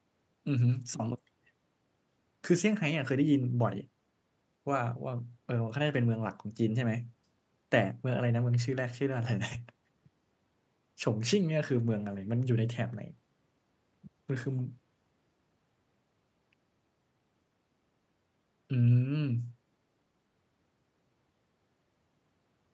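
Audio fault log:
Nothing stood out on listening to this speech, which carries the band-limited sound of a call path with no content above about 8 kHz.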